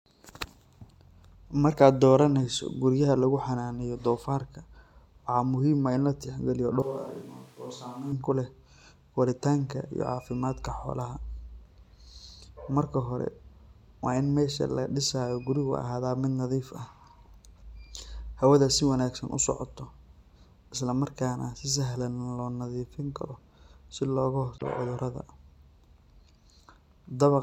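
From 6.82 s to 8.12 s the speech abruptly turns roomy and hollow, the sound of a switch to a distant microphone, likely because the close microphone's signal dropped out and a far pickup filled in. The level falls by about 10 dB, low end thins, and room noise rises to roughly 25 dB below the speech. On a waveform the envelope shrinks and the gaps fill with noise. A spectrogram shows weaker low bands, a raised noise floor and smeared reverberant tails, with hard edges at both switches.

At 24.54 s to 24.63 s a short glitch cuts through, caused by damaged data in a compressed stream. Corrupted bytes made the decoder misread the frames there and lose sync until it found a valid frame header again. The waveform shows a brief disruption that breaks the surrounding envelope, and the spectrogram shows a narrow vertical disturbance, with abrupt boundaries matching the affected frames.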